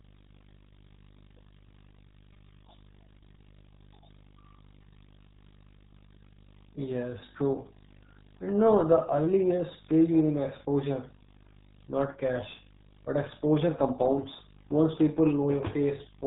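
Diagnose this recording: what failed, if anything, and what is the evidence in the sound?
Video or display buzz, analogue wiring stage: a 50 Hz buzz with hash above it runs through the whole speech clip, about 30 dB below the voice, plus a 15.6 kHz line-rate tone. A spectrogram shows a 50 Hz harmonic comb.

RealAudio 14.4 codec, codec stage: heavy damage throughout, with nothing above 3.8 kHz, so the speech sounds muffled and gargly, which fits an 8 kbit/s RealAudio 1 stream. The coder discards the upper band and coarsely models what remains. A spectrogram shows a hard ceiling at 3.8 kHz and smeared, blotchy formants below it.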